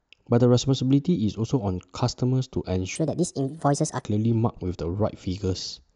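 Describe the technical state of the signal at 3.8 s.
At 3.8 s you're inside a wrong sample rate stretch, 2.96 to 4.04 s. It plays about 1.38 times fast, roughly 5.5 semitones high, which fits 32 kHz audio played at 44.1 kHz.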